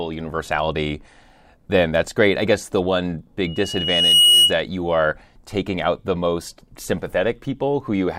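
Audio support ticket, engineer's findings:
Loudspeaker feedback squeal, 3.45–4.59 s. A single 2.9 kHz tone swells within a second, well above the speech. The mic picks up its own loudspeaker, and the loop gain exceeds one.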